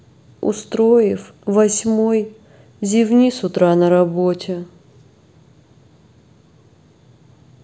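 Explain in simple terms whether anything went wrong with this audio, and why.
Nothing went wrong with this recording. Listening to it, no faults can be heard in the speech.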